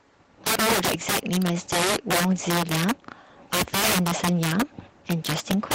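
Integer overflow runs through the whole speech clip. The gain pushes peaks roughly 14 dB past full scale, and instead of being held at the ceiling, those samples wrap around to the opposite extreme. Only a few percent of samples cross the limit, but each one flips across the full range, so loud syllables carry sharp, violent cracks. Clipping would flatten peaks into a buzzy, squared distortion. Here the wrapped peaks give jagged snaps that are far harsher than clipping.

Between 0.55 and 0.57 s comes a skip ahead. Roughly 0.4 s of speech was discarded while later audio was already queued, so playback jumps forward with no silence and no fill. The audio before and after the jump is spliced almost directly, and the speech simply lurches on. A dropout would leave an audible hole or a concealment smear. A skip ahead leaves none, and the only sign is that part of the speech is missing.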